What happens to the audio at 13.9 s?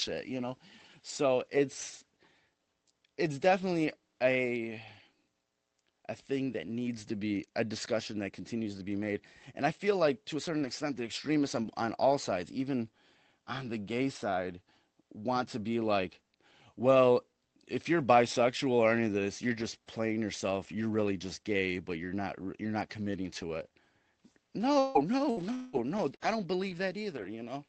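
Nothing goes wrong at 13.9 s: the speech passes through intact there, with only the ordinary band-limited character of the call codec path.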